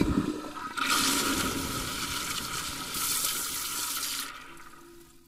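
From 2.94 s to the end at 5.28 s, pre-emphasis is left on: treble sits about 11 dB hot at 10 kHz, matching FM 50 µs boost, sounding thin and sibilant, with a spectrogram brighter above 3 kHz.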